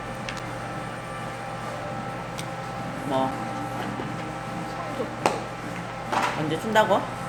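At 0.39 s and again at 3.31 s there is a CD skip. Each time the laser is thrown onto another turn of the disc's spiral, the player mutes for only a few milliseconds with a small tick, and playback resumes from a different point. Unlike a simple dropout, where the sound picks up exactly where it paused, here the continuity breaks: the audio lurches to another spot, a whole number of disc turns away.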